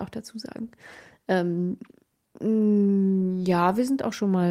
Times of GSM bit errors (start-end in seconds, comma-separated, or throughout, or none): none